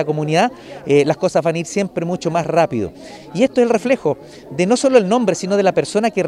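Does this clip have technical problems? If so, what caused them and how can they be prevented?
No, nothing technical stands out here, so there's no cause to track down and nothing you'd need to do differently next time.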